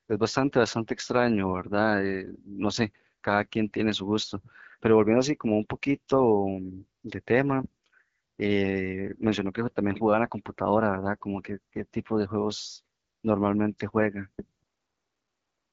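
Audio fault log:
Throughout: AMR wideband (HD Voice) codec damage. The speech sounds rough and raspy. The codec rebuilds the voice from pulses and a vocal tract filter, too coarsely here, which fits one of its lowest rates, near 8.85 kbit/s. Nothing is heard above 7.6 kHz.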